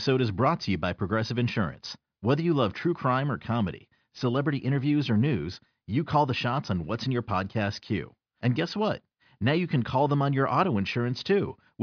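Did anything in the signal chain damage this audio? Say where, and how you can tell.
No, nothing in the chain audibly damaged this speech.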